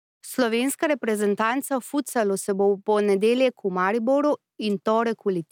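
No technical faults can be heard in the recording of speech. Nothing at any point calls for a timestamp or an explanation.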